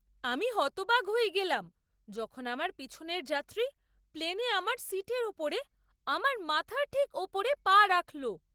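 The clip is speech, and Opus voice compression damages it throughout. The damage is plainly audible. The coder splits the band. Linear prediction handles the lower 8 kHz, and a transform layer thinly covers the rest. The band still reaches 20.2 kHz, but the excitation is coded coarsely. The speech sounds hoarse and slightly robotic. This points to hybrid mode at about 16 kbps, likely in 20 ms frames.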